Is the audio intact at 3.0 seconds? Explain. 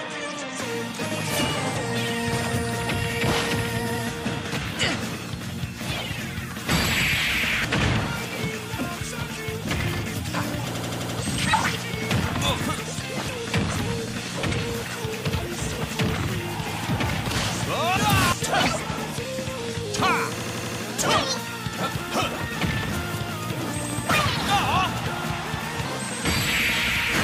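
Yes, at 3.0 seconds the audio runs continuously with no dropout, click, distortion or other fault to be heard.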